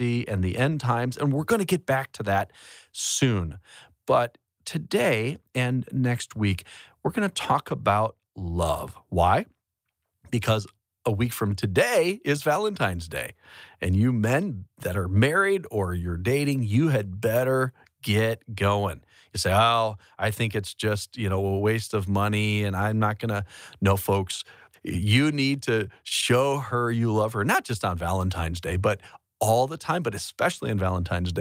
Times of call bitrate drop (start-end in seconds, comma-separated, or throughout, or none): none